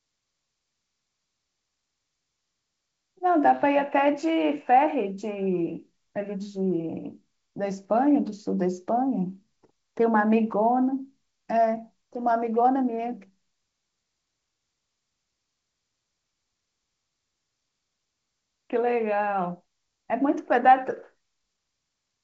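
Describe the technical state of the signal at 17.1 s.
At 17.1 s the speech is intact, carried by G.722 wideband telephone coding at 64 kbit/s with no fault at that moment.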